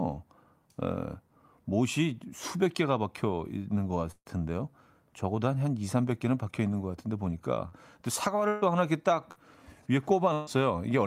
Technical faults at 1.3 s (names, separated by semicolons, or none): none